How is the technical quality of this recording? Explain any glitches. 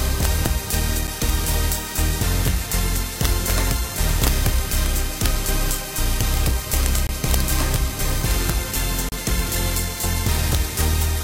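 The recording has two problems: harsh digital cracks on the loud moments, and a couple of short dropouts late in the clip.

Throughout, there's integer overflow. When the loudest peaks push about 4 dB past full scale, the value wraps around to the opposite extreme instead of being limited. Only a tiny fraction of samples are affected, but each one is a violent crack, far sharper than ordinary clipping.

Then there are two gaps between stream segments, at 7.07 to 7.09 s (about 23 ms) and 9.09 to 9.12 s (about 32 ms). Each is a hard-edged hole of silence. The two are spaced 2 s apart, which fits the timestamps of 2-second segments not quite lining up, with the player padding the gap with silence. Nothing is actually lost.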